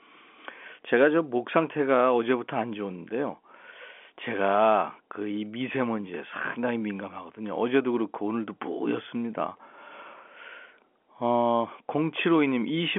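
Nothing here goes wrong: the speech simply carries the narrow, boxy character of G.711 telephone coding, with the sound held to roughly 250 Hz to 3.4 kHz as a normal phone line would leave it.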